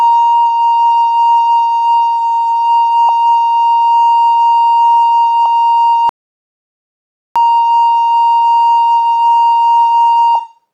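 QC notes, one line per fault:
3.09 s, 5.46 s, 10.35 s: compressed frames skipped. The music jumps ahead by whole 32 ms frames, about 150 ms, 200 ms and 70 ms lost, so the line lurches forward.
6.09–7.36 s: audio dropout to silence. The music cuts out mid-flow for about 1.26 s and returns abruptly, likely because the input was lost while silence kept being written. The waveform is flat and the spectrogram is blank, without even a noise floor.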